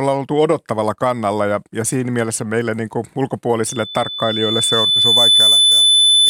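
From 3.67 s to the end, loudspeaker feedback squeal: the mic catches its own speaker, and a 3.5 kHz tone swells over about two seconds to sit roughly 5 dB above the speech.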